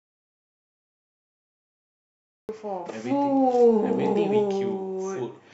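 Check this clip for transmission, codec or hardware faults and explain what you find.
There's one fault here: an audio dropout to silence covering the opening, already under way when the clip starts and lasting until about 2.49 s. The input was likely lost, so silence got written, giving dead silence with no room tone before the speech abruptly cuts in.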